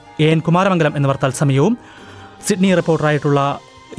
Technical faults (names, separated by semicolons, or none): none